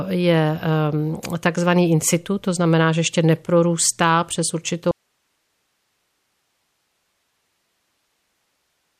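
At 4.91 s the speech cuts off abruptly, mid-flow rather than in a pause or a fade, and from there to the end of the clip only a faint hiss remains, roughly 50 dB below the level of the speech. This is an audio dropout to a faint residue. The likely cause is that the wanted signal was lost upstream while the rest of the path stayed live, so its own noise floor carries on through the gap.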